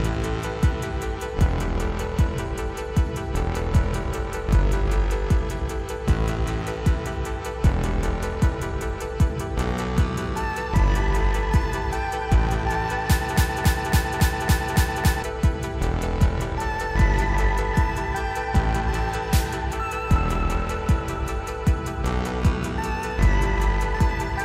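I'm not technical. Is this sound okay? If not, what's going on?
No. From about 13.37 to 15.23 seconds, the sound gets stuck: one short snippet, just over a quarter of a second long (about 0.28 s), plays seven times in a row, like a scratched CD skipping on the same spot. This is a broken-record loop. The likely cause is that the player or stream stalled and kept re-sending the last bit it had. Whatever should have played during those two seconds is missing.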